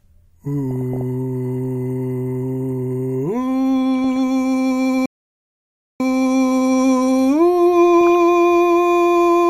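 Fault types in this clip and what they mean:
DAB burbling: Bit errors from weak reception slipped past error correction into the MP2 data, putting short blips of noise into single sub-bands; brief burbling hits the music three times.
playback stall: The player likely ran out of data or had its thread blocked, so the music cuts to silence for about 0.94 s, then carries on.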